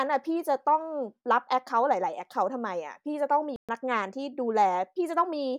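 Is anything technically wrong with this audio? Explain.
Yes. A playback stall runs from 3.56 to 3.69 s: the speech goes silent for about 126 ms, most likely because the player ran short of data, a longer gap than a brief dropout.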